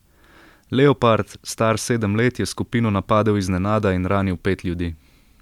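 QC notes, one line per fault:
No faults heard in the speech; nothing to log.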